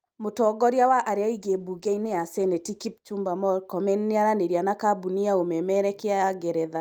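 A call bitrate drop runs from 1.39 s to 3.35 s. The connection's bandwidth estimate fell, and the encoder was forced to code the speech with far fewer bits. For about 1.9 s the sound turns coarse and muffled, with the upper frequencies cut away and a rough, watery texture. That degradation fits a fall from roughly 64 kbps to about 17 kbps. Clarity returns once the bitrate recovers after 3.35 s.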